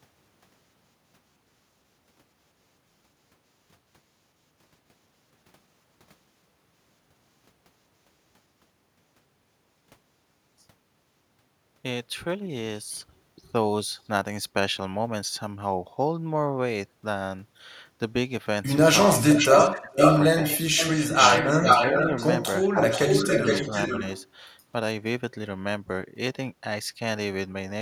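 It's a speech recording, and from about 19.3 to 24.3 s there's an echo leak: a copy of the voice comes back roughly 440 to 460 ms late, at 19.29–19.8, 19.98–20.22, 20.47–22.28 and 22.8–24.26 s. It's only a little quieter than the speech and at one point just as loud, most likely because a far-end loudspeaker echo got past the canceller. Tangled up with that, the talker gets speech suppressed in double talk at 19.65–19.98, 20.38–20.44, 21.59–21.66 and 22.65–23.0 s, dipping by anything from a few dB to around 30 dB. That's what you'd expect when the canceller can't tell the talker from the echo and pulls both down.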